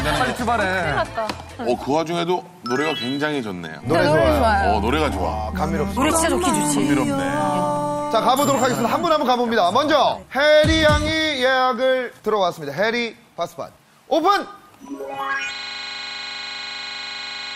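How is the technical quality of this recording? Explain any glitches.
One glitch stands out. A system hang loop runs from 15.55 s to the end: the system froze while the hardware kept replaying one 40 ms buffer, producing a steady 25 Hz buzz.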